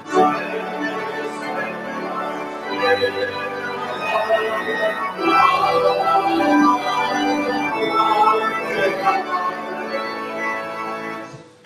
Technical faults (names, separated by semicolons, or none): noise suppressor applied to music or sounds; sound cut by the noise suppressor